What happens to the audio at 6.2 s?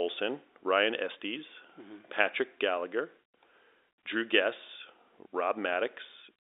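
Nothing goes wrong at 6.2 s: the speech continues intact through that moment, carried over the telephone-band G.711 path as it is everywhere else.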